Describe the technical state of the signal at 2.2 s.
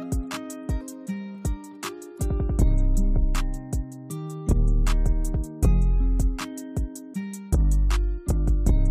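At 2.2 s the signal is intact, with no audible fault at that moment.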